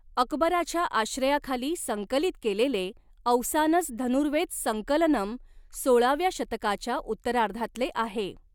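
Nothing in the technical state of this speech recording points to a fault, with no audible defect anywhere in the signal.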